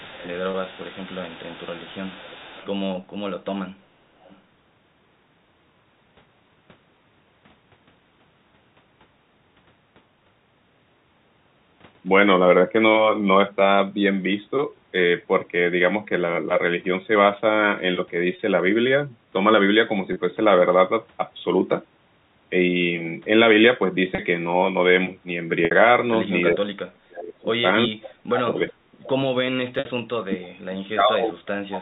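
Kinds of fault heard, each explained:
Echo leak: A faint delayed copy of the voice trails it by 381 ms, about 25 dB down through the first 2.7 s and briefly near 28.7 s, and fainter near 4.2 s. It is likely residual loudspeaker pickup the far end's echo canceller missed. Unlike reverberation, it is a distinct repeat at one fixed delay.
Packet loss with pitch repetition: Short gaps are bridged by repeating the last pitch cycle, giving a brief held, buzzy tone: 30 ms each at 0.51, 18.36, 20.13 and 24.15 s, and 60 ms at 25.65 and 29.79 s, where the repeat fades into silence before speech returns with a short cross-fade. Unlike a clean dropout, the gap is at least partly filled rather than simply silent.
Speech suppressed in double talk: From 26.5 s to the end the voice repeatedly dips by up to about 40 dB, in stretches from roughly 0.3 s to 2 s. The likely cause is an echo canceller turning the line down while both sides talk. 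These are level drops lasting hundreds of milliseconds, not buzzy fills lasting tens.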